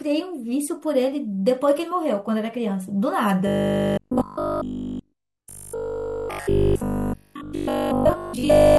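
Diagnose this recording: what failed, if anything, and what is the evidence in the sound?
Robotic sound from repeated short buffers, 3.47 to 8.77 s. The speech becomes a rigid 50 Hz buzz throughout. Likely a starved buffer repeating 20 ms blocks.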